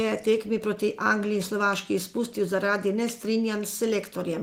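No faults can be heard anywhere in the recording.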